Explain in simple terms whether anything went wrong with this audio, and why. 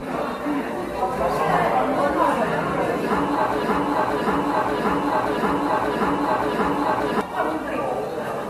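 Generation loss runs through the whole clip. The audio sounds swirly, smeared and hollow, with soft, blurred attacks and nothing above about 14 kHz. That likely comes from being compressed and decompressed around seven times, each pass adding fresh damage.

A broken-record loop runs from 3.63 to 7.21 s. The same 0.58-second piece plays six times back to back, and the audio that belonged there is lost. The likely cause is a player or stream that stalled and kept resending its last fragment.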